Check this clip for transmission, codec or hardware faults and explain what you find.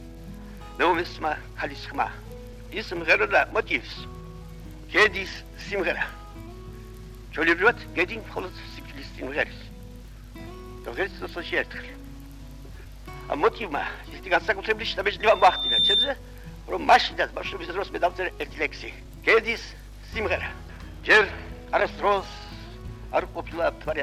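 One fault stands out: a loudspeaker feedback squeal from 15.20 to 16.13 s. A microphone was picking up the loudspeaker it was feeding, and at 3.6 kHz the loop gain rose above one, so that frequency kept amplifying itself on each pass. It is heard as a thin, piercing tone that swells over roughly half a second until it sits a few decibels above the rest of the sound.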